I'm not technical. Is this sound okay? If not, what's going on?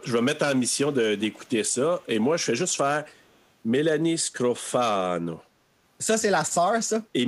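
No. At 1.18 to 1.5 s and 3.19 to 3.36 s there's an echo leak: a very faint copy of the speech returns 0.37 s late, likely from a speakerphone whose echo cancelling missed it. Unlike room reverberation, it's a separate repeat, not a smooth tail.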